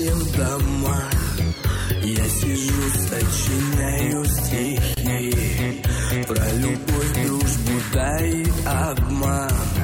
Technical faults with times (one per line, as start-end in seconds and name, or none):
4.94-4.97 gap at a join of encoded pieces